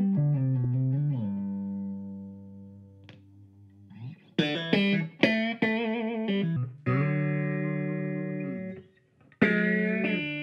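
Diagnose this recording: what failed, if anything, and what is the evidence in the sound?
From 6.56 s to the end at 10.43 s, a section plays at the wrong speed: the sound abruptly slows to about 0.75 times its original rate, and its pitch drops by about five semitones at the same instant, so timing and pitch shift together. The likely cause is at the playback or editing stage, where this stretch was clocked at the wrong rate, stretching its duration and lowering every frequency by the same ratio.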